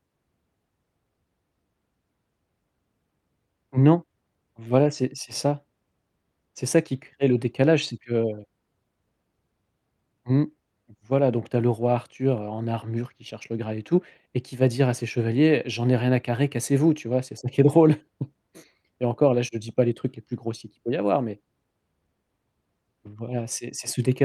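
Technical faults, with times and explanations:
Nothing stood out as a technical problem when listening to the recording.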